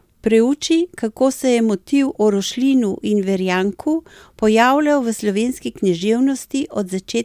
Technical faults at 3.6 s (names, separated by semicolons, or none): none